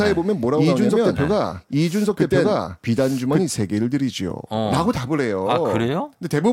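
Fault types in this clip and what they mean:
Doubled audio track: from the start until 3.42 s, a second full-band copy of the speech runs about a second behind at roughly equal loudness, dry with no decay, then stops abruptly. Likely a slower capture path or misaligned edit feeding the same audio twice.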